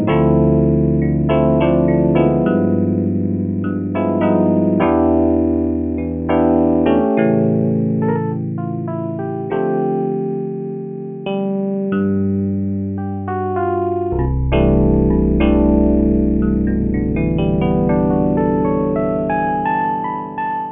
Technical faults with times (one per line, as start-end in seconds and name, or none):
0.00-20.71 aliasing